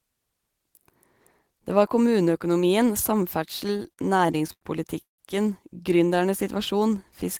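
From 3.67 to 4.64 s, packets kept reaching the receiver late or more slowly than they were being played, so its jitter buffer ran dry eleven times. Each time, the receiver stretched the last sound to cover the wait, for 260 ms of filler in total and about a quarter of that span, with the longest single gap 87 ms. Nothing is lost, but the passage drags and stutters in a series of short catches. These are repeated stalls (stutter).

Between 5.01 and 5.21 s comes a call audio freeze, likely from packets held up in transit that emptied the buffer once more. The receiver carries the last sound forward briefly as it fades, and then 140 ms falls silent, 171 ms of inserted time altogether. When the audio resumes it picks up where it stopped, with nothing missing, but from here on it runs 171 ms later than before.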